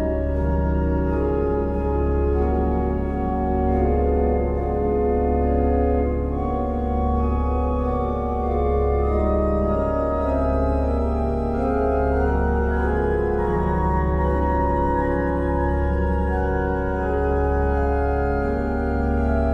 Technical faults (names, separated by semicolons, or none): none